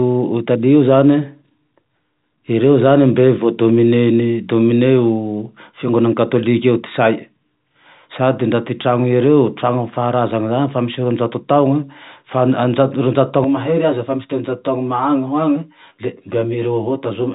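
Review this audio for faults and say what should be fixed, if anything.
Channel delay comb filtering starts at 13.44 s and runs to the end. One channel lags the other by roughly 10 ms. Summed to mono, shared content cancels at evenly spaced frequencies, first near 50 Hz. The speech turns hollow and phasey. Time-align channels before folding to mono.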